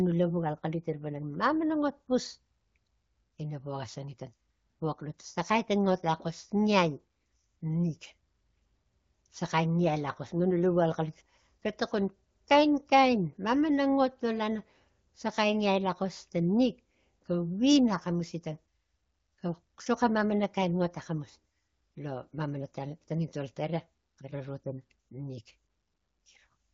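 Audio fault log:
No faults are heard anywhere in the speech. The AMR wideband (HD Voice) codec path keeps the speech clear with only a light coding colour, which points to one of its upper rates, around 16 kbit/s.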